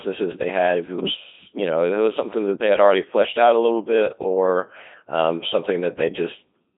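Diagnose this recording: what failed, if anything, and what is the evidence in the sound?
Codec 2 vocoder damage runs through the whole speech clip: the voice is robotic and buzzy, confined to about 200 Hz to 3.7 kHz, with nothing above 3.8 kHz. This is a codec-stage fault. The waveform was discarded, and only pitch, voicing, energy and envelope were resynthesised from sine waves, which fits a 2.4 kbit/s mode.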